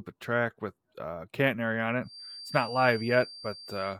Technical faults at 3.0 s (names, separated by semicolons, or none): feedback whistle